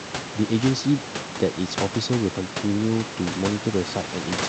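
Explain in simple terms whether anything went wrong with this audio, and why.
Nothing stood out on listening: the background noise of the room stays below the speech, and the call connection carries it the way an ordinary online call would.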